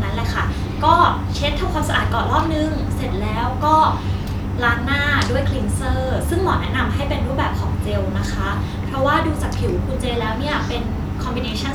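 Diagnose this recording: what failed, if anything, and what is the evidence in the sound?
Nothing in the recording points to a failure at any stage of the chain, and the speech signal holds steady and continuous throughout.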